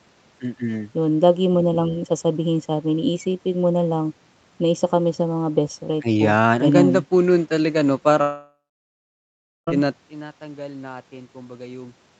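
At 8.21 s the stream most likely suffers a long network dropout: packets stop arriving for roughly one and a half seconds, until 9.69 s. The receiver extends the last speech sound into a fading buzzy hiss, which dies away after a few tenths of a second. About 1.1 s of near silence follows. The speech then resumes further on, with about 1.46 s of it simply gone. The whole clip stays band-limited to 8 kHz by the call codec.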